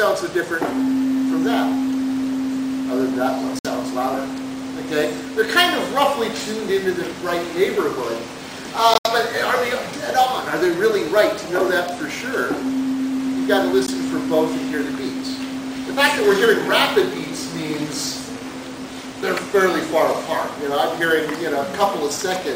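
Bluetooth dropouts break the sound three times, most likely because packets failed to reach the headphones in time and were discarded. At 3.59 to 3.67 s about 56 ms vanishes; at 8.94 to 9.08 s two holes totalling 84 ms, the longest 70 ms, scatter across roughly 112 ms; at 13.86 to 13.89 s a brief gap of about 14 ms. Each cuts to silence, then the sound resumes further along, as if it had kept playing.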